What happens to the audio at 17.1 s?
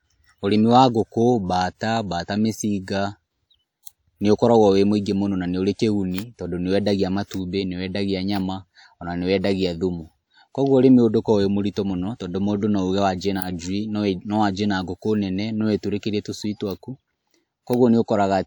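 At 17.1 s, as throughout, the speech shows low-bitrate audio saved at a high bitrate. A later MP3 likely re-encoded lossy audio, keeping the earlier coding damage.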